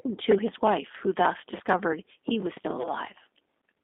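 The whole clip of speech carries G.729 codec damage. The line passes only about 200 Hz to 3.6 kHz. The sound fits an 8 kbit/s G.729A coder. Speech is rebuilt from a filter and a few pulses, so it sounds plainly rough and synthetic.

At 2.82 s comes VoIP packet loss concealed by the speech codec. The gap points to one lost packet of about 20 ms. The decoder stretched the preceding sound into a fading buzz or coloured noise. The voice stays weak and distorted until about 2.91 s.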